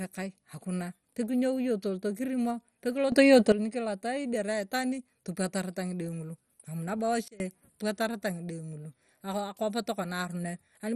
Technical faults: MP2 compression; sudden gain jump

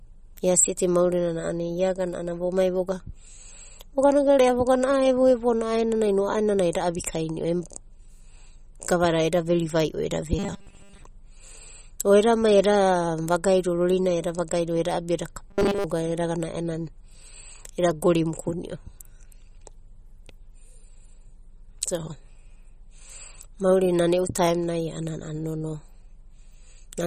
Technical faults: MP3 compression; robotic sound from repeated short buffers

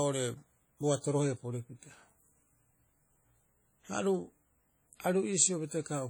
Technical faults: WMA compression

